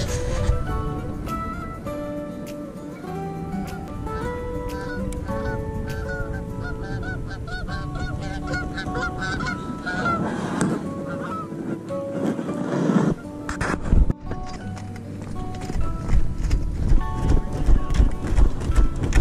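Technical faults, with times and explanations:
3.88 s, 14.56 s, 17.90 s: compressed frames skipped. The audio jumps ahead by roughly 200, 300 and 100 ms, which fits dropping whole 92.9 ms frames.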